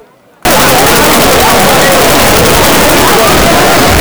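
From 0.45 s to the end at 4.0 s, the sound turns into a loud, harsh distortion in which quiet moments are as loud as the rest. This is likely signed and unsigned mixed up in the 8-bit samples: the top bit is flipped, so each zero crossing becomes a full-range jump.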